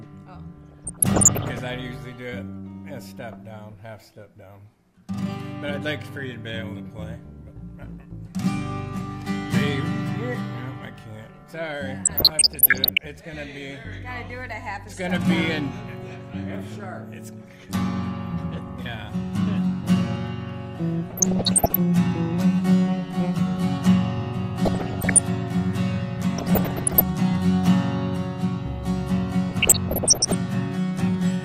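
DAB burbling shows up at 0.61–1.59, 12.05–13.06, 21.10–21.75, 24.65–25.19, 26.38–27.01 and 29.49–30.34 s. Bit errors around one percent slip past error correction, so corrupted samples put short noise blips in single sub-bands and corrupted scale factors make sub-bands jump in level for up to a frame, giving a burbling, blipping sound.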